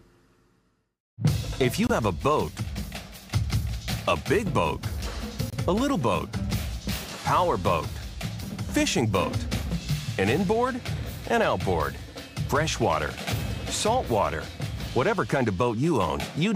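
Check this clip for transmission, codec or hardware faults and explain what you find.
Two runs of corrupt frames were decoded, one at 1.87 to 1.91 s and one at 5.50 to 5.56 s. Damaged frames were played with misplaced spectral energy, giving a chirp, squeak, blip or noise burst lasting a frame or two, not a sharp click. The first error reaches about -10 dBFS; the second is weaker, near -25 dBFS.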